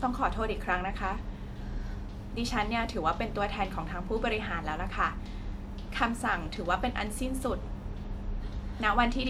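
No technical faults are audible.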